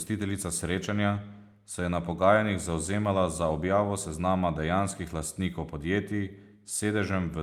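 No technical faults can be heard anywhere in this speech recording. Nothing in it calls for a time mark or a note on how it went wrong.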